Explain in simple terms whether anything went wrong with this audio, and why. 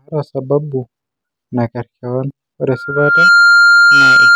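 A microphone was picking up the loudspeaker it was feeding, causing loudspeaker feedback squeal. From 2.68 s to the end, a single 1.4 kHz tone swells up over about half a second and screams louder than the speech.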